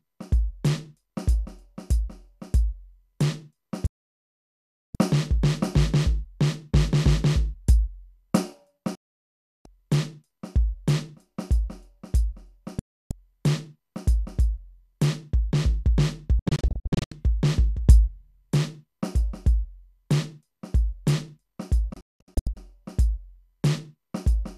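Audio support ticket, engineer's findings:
Digital broadcast dropout at 3.86–4.95 s, 8.95–9.66 s, 12.79–13.11 s, 16.39–17.12 s and 21.94–22.57 s. The music fades out over about 3 ms. The receiver lost frames and muted until valid frames returned. The last two are clusters of short holes. The missing programme is gone.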